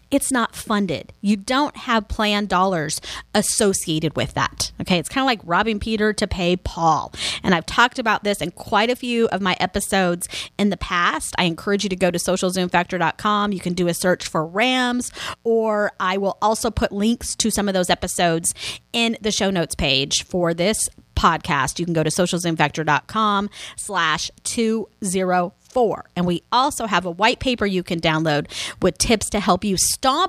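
A mains buzz runs under the speech from start to finish. Its harmonic series is built on 60 Hz, so the hum comes from a 60 Hz supply, and it reaches well up into the kilohertz range, which gives it a raspy, edgy quality rather than a smooth low hum. Sharp switching spikes entering the signal path twice per mains cycle produce that dense ladder of harmonics. The buzz stays steady throughout, sitting roughly 40 dB below the speech.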